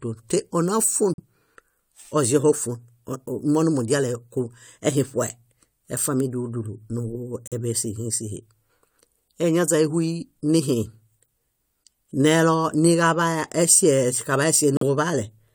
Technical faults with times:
1.14-1.20 corrupt frame muted
7.47-7.53 corrupt frame muted
14.77-14.83 corrupt frame muted

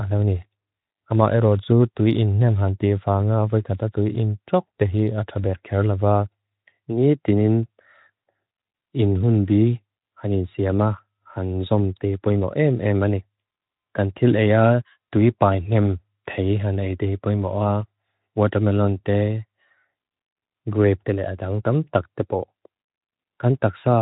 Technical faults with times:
none

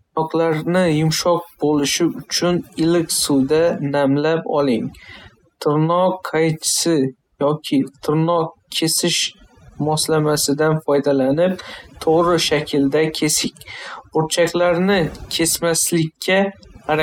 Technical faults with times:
0.00-17.03 overdone noise removal
3.73-4.02 CD scratch ticks

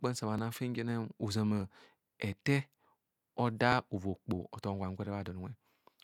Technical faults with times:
0.38 repeated buffer
1.61 repeated buffer
3.72 repeated buffer
5.06 repeated buffer

